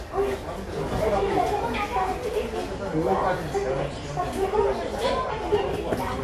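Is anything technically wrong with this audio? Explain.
Yes. Transcoding between lossy codecs runs throughout the sound. Nothing is present above 14 kHz, and smeared, swirly artefacts of two different characters overlap. This likely comes from an AAC encode at a low rate, near 64 kbit/s, re-encoded as WMA, with the second codec stacking its own errors on the first.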